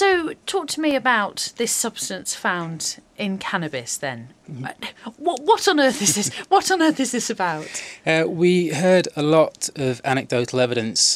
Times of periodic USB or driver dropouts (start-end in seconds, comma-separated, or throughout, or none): 0.91-4.91